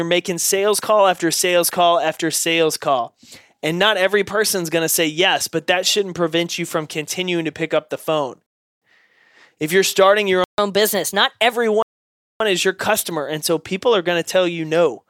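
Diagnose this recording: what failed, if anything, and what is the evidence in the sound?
Rebuffering stall at 8.46 to 8.82 s and 11.82 to 12.40 s, in playback: the player drained its download buffer, went silent for 0.35 s and 0.58 s, then resumed exactly where it stopped.

Playback stall at 10.44 to 10.58 s: the sound halts mid-flow for about 0.14 s, likely because the player starved of data or its output thread was blocked.

Catch-up at higher speed from 10.58 to 11.53 s, right after that stall: the player resamples its backlog at 1.15x, raising pitch roughly two semitones, then returns to normal speed.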